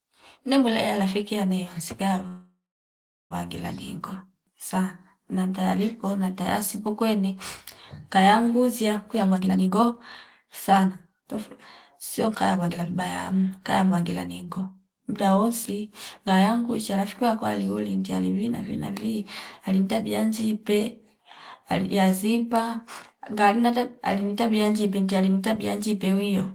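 At 2.27 s, right after "mwele alafiki yane msiga", the speech stops and the last sound is carried on as a fading buzz that drops into silence for about 0.74 s. It then resumes at 3.33 s exactly where it left off. This is a call audio freeze, likely caused by delayed packets draining the jitter buffer. About 1.03 s of filler is inserted, no speech is lost, and everything after it plays about 1.03 s later.

That added delay is then worked off by jitter buffer speed-up. After "kaya nguzia", from 9.07 to 9.94 s, playback runs at 150% speed with roughly 0.4 s cut out. From 10.42 to 11.37 s it runs at 129%, dropping roughly 0.3 s. From 12.24 to 14.67 s, leading into "mdaa wosi ngaya mkucha", it runs at 112%, removing roughly another 0.3 s. In each stretch the receiver deletes many short pitch-period pieces in succession, so the pitch stays the same while the speech sounds hurried.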